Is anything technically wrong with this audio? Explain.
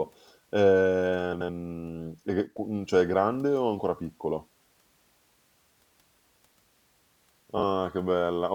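Yes. There are two kinds of fault in this speech clip.

Frames out of order occur at 1.33 to 1.49 s and again at 7.57 to 7.63 s. Two adjacent runs of audio play in swapped order. The first swap uses blocks of about 78 ms, and the second uses blocks of about 26 ms. Each swap sounds like a brief garbled flutter. No time is lost.

One channel drops out at 2.47 to 2.57 s. The level falls abruptly by about 6 dB for that tenth of a second. This is likely because one stereo channel went missing before the mono sum, which halves the shared content.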